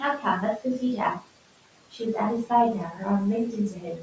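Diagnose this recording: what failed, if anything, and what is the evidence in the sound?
The failure sits in the call processing stage, in the noise suppressor. It shows noise suppressor artifacts throughout the clip. The room noise sits about 17 dB below the speech. The suppressor pulls it down by about 18 dB, frame by frame, in the bands it judges to be steady noise. So the background sinks in the gaps between phrases and comes back up under the speech. That pumping floor is the evidence.

The same suppressor also causes speech cut by the noise suppressor, three times. At 1.15 to 1.28 s, parts of the speech drop by up to about 17 dB. At 1.91 to 2.0 s, the drop is about 15 dB. From 3.73 s to the end of the clip, it is about 7 dB. Each time, quiet speech energy was misread as noise and turned down with it. Those moments sound swallowed and faint.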